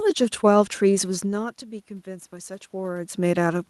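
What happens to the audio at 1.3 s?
Automatic gain rising begins at 1.25 s and continues to the end of the clip at about 3.69 s. The speech level at the microphone fell by about 16 dB, so the automatic gain control treats the input as too quiet and slowly turns its gain up, by about 4 dB across this span. Because the boost applies to everything picked up, the voice and the room noise behind it swell together gradually rather than jumping.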